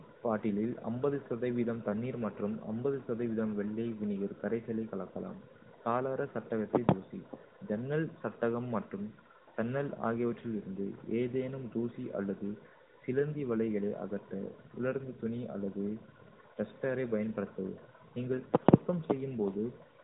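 No technical faults can be heard in this speech recording. It has passed through an AMR narrowband mobile codec, so nothing above about 3.8 kHz comes through, and the light coding damage points to the codec's highest 12.2 kbps mode.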